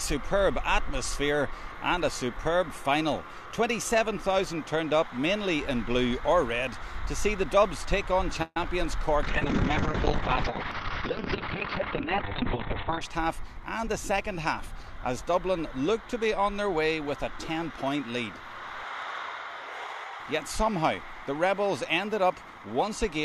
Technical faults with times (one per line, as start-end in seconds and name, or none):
8.42-8.57 call audio freeze
8.64 short concealed packet loss
9.23-13.07 call bitrate drop
12.35-14.84 jitter buffer speed-up